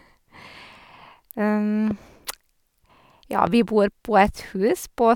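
A sudden voltage step, most likely from a plug, switch, static discharge or driver glitch, entered the signal path of this speech clip twice, producing a loud pop at 1.91–1.93 s and another at 3.47–3.49 s. Each is a single sharp crack riding over the ongoing speech, the second louder, peaking about 10 dB above the speech against about 5 dB for the first.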